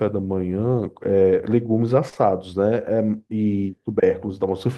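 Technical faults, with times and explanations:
2.09 to 2.17 s: short concealed packet loss, two back-to-back gaps at 2.09 s and 2.14 s. Each time about 20 ms of the speech stream arrived too late for the decoder. The receiver covered the first hole with 28 ms of made-up signal and the second with 12 ms, extending the preceding sound before blending back into the real audio. The result is a brief smeared wobble in the speech, lasting under a tenth of a second.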